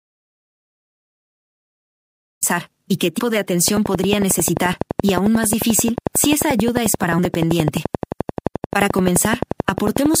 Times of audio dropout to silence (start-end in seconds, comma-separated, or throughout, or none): 0.00-2.43